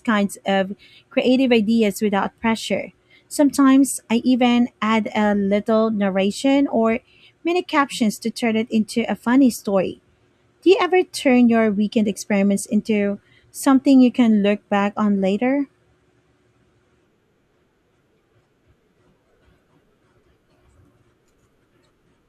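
Listening to the speech in this recording, nothing stood out as a technical problem anywhere.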